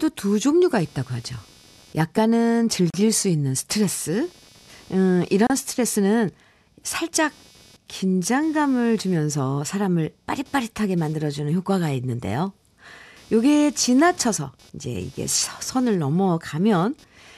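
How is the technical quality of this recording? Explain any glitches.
The quality is compromised by two faults: an electrical buzz and two short dropouts.

Computer activity noise runs throughout. Changing processor, graphics or mouse load disturbs the ground that the audio circuit shares with the computer. The result is a buzzy, chirping texture pulsing a few hundred times per second, sitting well below the speech and following the machine's activity rather than the talker.

A gap at a join of encoded pieces appears twice, at 2.90 to 2.94 s (about 37 ms) and at 5.47 to 5.50 s (about 31 ms). Separately encoded segments were joined without trimming the encoder's start-up delay and end padding. Each join leaves a brief silence with smeared edges before the speech resumes where it stopped.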